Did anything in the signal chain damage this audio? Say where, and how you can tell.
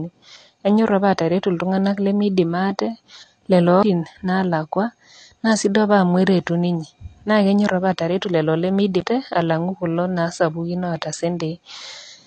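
Yes. At the codec stage, likely AAC compression at a low bitrate: the speech sounds dull and smeared throughout, with nothing above 8.5 kHz.

At playback, CD skips at 3.83 s and 9.00 s: the laser jumped tracks, giving a tick, mutes of roughly 7 ms and 10 ms, then resumption elsewhere.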